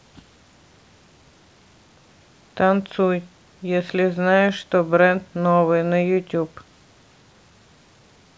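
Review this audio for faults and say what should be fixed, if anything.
Nothing stood out on listening to this speech, so there is nothing here that needs fixing.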